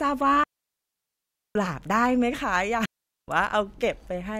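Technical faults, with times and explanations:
0.44 to 1.55 s and 2.85 to 3.28 s, digital wireless dropout: the speech stops cleanly into near silence, first for about 1.12 s, then for about 0.43 s, and resumes just as cleanly. The receiver lost too much of the digital stream to decode and muted itself with a very fast fade. Unlike an analogue radio dropout, no hiss, static or noise burst surrounds either gap. Only a smooth hole is left.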